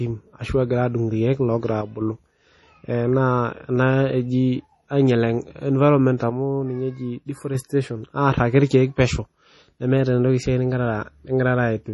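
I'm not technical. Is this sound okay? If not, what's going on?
No. Throughout the clip, the speech was likely saved with MP3 compression squeezed very hard. To save space, the encoder throws away detail it judges least important and cuts off all the high treble, here everything above about 11.5 kHz. The result is heavy damage: the speech sounds watery and swirly, s sounds can turn metallic or chirpy, and the crisp starts of sounds get smeared.

Twice, one channel drops out, likely because one side of a two-channel signal briefly went silent. The clip is a single channel built from both sides, so losing one makes the speech suddenly quieter without changing its character. This happens from 1.82 to 2.01 s, right after "egira adung irkeek logira", and again from 6.30 to 7.55 s, right after "ena eji ainyel environment". Each time the level snaps back afterwards.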